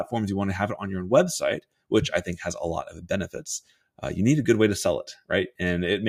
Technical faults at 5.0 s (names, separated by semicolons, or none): noise suppressor applied to music or sounds